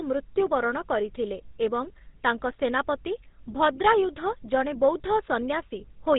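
Speech with a buzzy, gravelly roughness and a dull, narrow top end from start to finish, plainly audible throughout. The cause is the GSM full-rate codec: it rebuilds the voice from a vocal-tract model driven by a sparse pulse train, drops everything above 4 kHz, and fits a 13 kbps stream.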